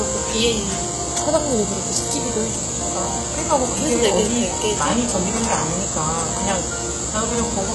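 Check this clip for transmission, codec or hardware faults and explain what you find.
One codec fault runs through the whole clip: the treble sounds gritty and metallic, with harmonics that don't line up across the upper range and nothing above 11.5 kHz. This is likely HE-AAC compression, and the heavy damage points to a very low bitrate, around 12 kbps. The codec kept only the lower spectrum and synthesised the top by copying lower bands upward under a coarse envelope, so the brightness is invented rather than original.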